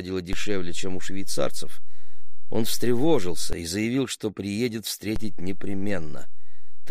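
A low thump lands at 0.33 s and another at 3.53 s, then a third at 5.16 s. These are DC steps: the waveform's zero line jumps to an offset of about -16 dBFS, holds, and drops back at 3.53 s. It jumps again at 5.16 s by about -19 dBFS and stays offset to the end. Each sudden shift of the baseline is heard as a thump or click, while the sound itself carries on unchanged.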